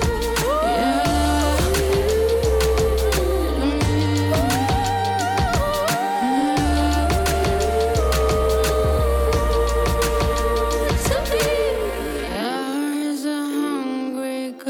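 A time-stretched section runs from 11.71 s to the end at 14.70 s: the pace abruptly drops to about 0.59 times normal while pitch holds, leaving the audio dragging. This is likely software lengthening the passage by repeating short slices to fit a target duration.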